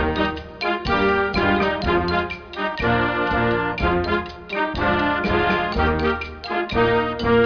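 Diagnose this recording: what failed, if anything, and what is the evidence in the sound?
Nothing in the recording points to a failure at any stage of the chain. There is no audible evidence of a fault to trace to wiring, conversion, buffering, processing, transmission, storage or playback.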